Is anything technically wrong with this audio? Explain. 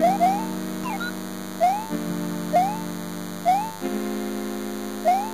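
Yes. A DECT cordless phone buzz runs through the whole clip. A nearby handset or base transmits a radio burst every 10 ms, which the audio circuitry rectifies, producing a thin, rasping 100 Hz buzz rich in harmonics about 15 dB below the sound. Unlike smooth 50 or 60 Hz mains hum, it is pulsed and edgy.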